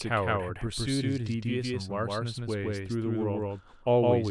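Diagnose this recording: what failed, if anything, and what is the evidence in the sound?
Doubled audio track throughout: every onset repeats about 150 ms later at roughly equal level, visible as paired waveform transients and spectrogram patterns. Likely cause: a duplicate capture path at the driver stage.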